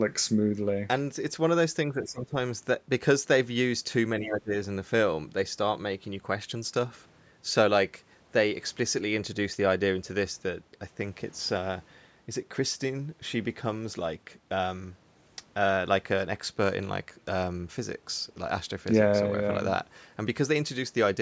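Twice in this speech recording the talker's level sinks abruptly, by up to roughly 15 dB, from 1.9 to 2.35 s and again from 4.2 to 4.53 s. This is speech suppressed in double talk, likely an echo canceller that mistook overlapping far-end talk for echo and attenuated the near-end speech along with it.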